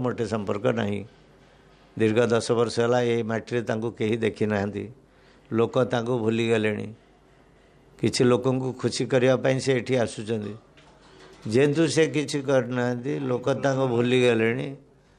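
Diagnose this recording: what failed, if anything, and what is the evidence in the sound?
From 11.62 s to the end there's a time-stretched section. The pace drops abruptly to about 0.74 times normal speed while the pitch holds steady, and that stretch drags. That's what you'd expect when short chunks get repeated to pad the length without retuning. The stage is likely software processing before storage, where an edit or length-fit stretched the tail of the file.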